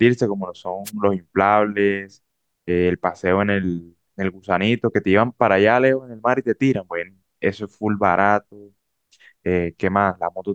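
At 0.85 s a wireless microphone noise hit lasts about 60 ms, to 0.91 s. The analogue FM radio link briefly faded, probably as reflected signals cancelled at the receiver, so receiver noise rose. It sounds like a short swish or burst of static. On a spectrogram it shows as a brief vertical smear of broadband noise across the speech harmonics, and the waveform carries a short, ragged burst there.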